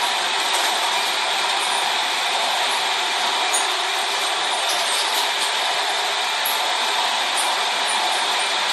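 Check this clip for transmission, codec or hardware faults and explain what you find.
There is one codec fault, present for the whole clip. Generation loss runs throughout these sounds. It is swirly, hollow and smeared, and attacks blur. It was likely caused by MP3 encoding repeated about four times at what sounds like 64 kbit/s, each pass requantising on a shifted frame grid. On a spectrogram, nothing appears above 13.7 kHz.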